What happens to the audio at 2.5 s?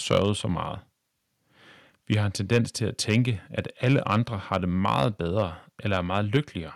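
At 2.5 s the speech is in a stretch of microphone overload, from 2.12 to 2.58 s. The input likely ran about 3 dB past the converter's limit, flattening waveform crests and adding a crackling edge, seen as vertical broadband smears on a spectrogram.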